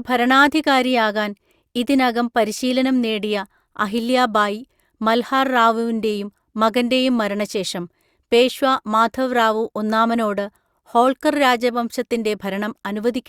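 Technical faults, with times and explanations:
No technical faults detected anywhere in the speech recording.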